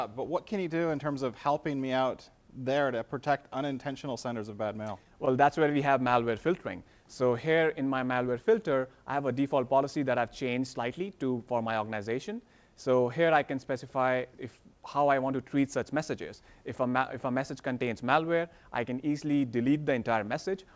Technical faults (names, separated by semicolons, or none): scattered short gaps; jitter buffer slow-down